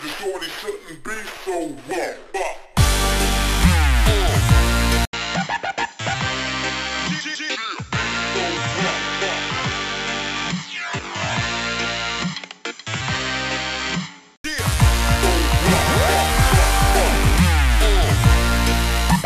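At 5.05 s the audio drops out for about 80 ms, then returns duller, somewhat quieter by around 5 dB, with nothing above 7.6 kHz and faint new background noise sitting well below the signal. At 14.44 s the full, brighter sound comes back. This is an input switched to a poorer device: the recording likely moved to a narrower-band microphone or headset profile, with its own tone, level and noise, then switched back.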